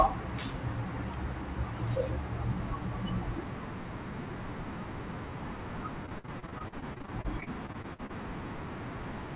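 Speech carried over a narrowband call link, with nothing above 4 kHz, breaks up into repeated packet loss (robotic sound) from 6.06 to 8.11 s. Some 22 short holes, none longer than about 52 ms, are each patched by stretching the preceding sound, so about a quarter of that stretch is synthetic fill. Unlike a single dropout, the gaps recur in quick succession, which gives the choppy sound with pieces missing rather than one clean silence.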